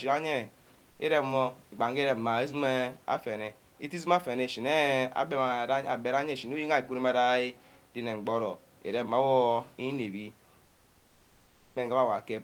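The sender likely stopped transmitting during pauses (discontinuous transmission), so the receiver fills 0.91–0.99 s and 10.65–11.75 s with comfort noise in place of the background: the room noise turns steady and featureless, about 3 dB and about 4 dB quieter respectively.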